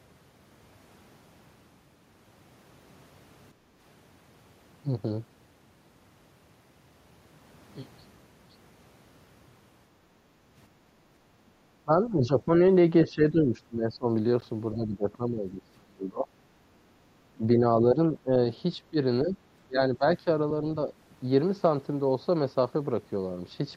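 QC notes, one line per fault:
3.54–3.76 s and 10.22–10.55 s, background gated by the echo canceller: while the far end plays, the canceller pulls the microphone down by about 8 dB and about 7 dB for roughly a fifth and a third of a second. On a spectrogram the room noise floor thins into a pale band, then recovers.
11.85–12.49, 13.09–14.06, 14.75–16.27, 17.35–17.60, 17.94–18.30 and 18.90–20.27 s, speech suppressed in double talk: the talker dips in patches, from about 10 dB to about 25 dB deepest near 15 s. This is likely the canceller attenuating overlapping talk. The waveform shows ragged, notched envelopes.
14.41 s, Bluetooth dropout: a 14.5 ms hole, which fits a single lost packet, likely on the wireless link. The waveform falls to a flat line and resumes mid-sound as if playback had continued. The spectrogram shows a thin full-height vertical gap.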